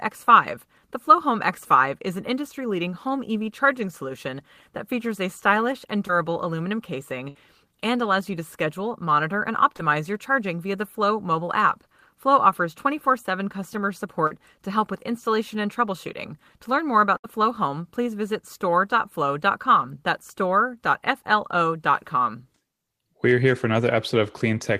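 Short concealed packet loss comes first, at 6.07 to 6.11 s, just after "features a stylish and": about 20 ms of the call arrived too late, and the receiver extended the preceding sound across the hole, leaving a smear before "aluminum casing and allows". The same brief wobble recurs at 9.77 to 9.81 s and 14.27 to 14.33 s, the latter a 40 ms gap. A burst of packet loss at 7.29 to 7.37 s, after "aluminum casing", drops about 60 ms. The decoder holds and fades the last sound before "and allows you to" resumes. A second burst at 17.17 to 17.26 s, after "learn more", loses about 80 ms in the same way.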